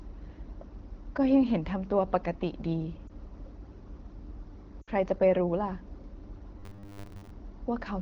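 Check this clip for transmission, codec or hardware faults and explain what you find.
Two kinds of fault turn up in the speech: lost AMR speech frames at two points, and a stretch of robotic sound from repeated short buffers near the end. The AMR wideband (HD Voice) coding itself sounds clear.

Lost AMR speech frames, 3.08 to 3.10 s and 4.82 to 4.91 s: corrupted frames failed their check, so the decoder rebuilt them from the last good pitch and vocal tract settings at falling gain. The first is a brief warble, fitting one lost 20 ms frame. The second, about 60 ms, drops to near silence before speech returns roughened.

Robotic sound from repeated short buffers, 6.60 to 7.30 s: audio most likely arrived too seldom, so playback kept looping the newest slice while most of the real signal was skipped. The loops impose a steady 100 Hz metallic buzz, which fits a 10 ms buffer, over speech that still roughly tracks.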